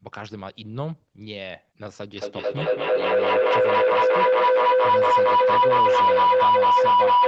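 At 2.17 s a feedback howl sets in and runs to the end of the clip at 7.27 s. Two devices in the same room share the call, so each trip from microphone to loudspeaker and back adds level. The repeats climb instead of dying away, narrowing to a tone around 1 kHz that repeats roughly every fifth of a second and peaks about 14 dB above the speech. An ordinary echo would fade; this one keeps growing.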